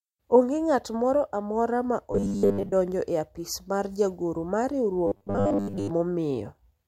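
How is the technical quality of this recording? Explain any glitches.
The recording has two glitches: robotic sound from repeated short buffers, from 2.12 to 2.73 s and again from 5.07 to 5.90 s. In both, the speech turns into a rigid metallic buzz at a fixed 100 Hz. That points to a repeated 10 ms buffer, likely caused by audio arriving too seldom, with most of the real sound skipped. Unlike ordinary distortion, the buzz rate stays fixed while the speech still roughly shows through.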